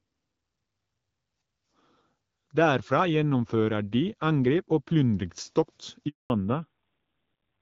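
At 6.08 s the call is handed from one network to another, and no speech frames arrive until 6.3 s. The speech dies away within a few tens of milliseconds, leaving a 220 ms handover gap of silence in which everything said is lost.

When the new link starts at 6.3 s, the call has fallen back to narrowband coding. The sound points to a drop from AMR wideband (HD Voice) at about 12.65 kbit/s to AMR-NB at roughly 7.4 kbit/s. From there to the end, nothing above 4 kHz remains, and the speech turns dull and rougher.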